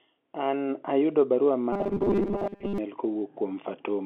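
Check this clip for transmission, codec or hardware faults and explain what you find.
One transmission fault stands out in this speech clip: robotic sound from repeated short buffers, running from 1.73 to 2.78 s. Across that stretch the speech collapses into a rigid, metallic buzz at 200 Hz that only loosely tracks the syllables. The likely cause is audio arriving too late, so the player keeps replaying a roughly 5 ms slice in place of most of the real signal. On a spectrogram this looks like evenly spaced horizontal harmonics locked to 200 Hz. The waveform shows a short, identical cycle repeating. The telephone band of about 250 Hz to 3.5 kHz from the G.711 line coding is audible throughout.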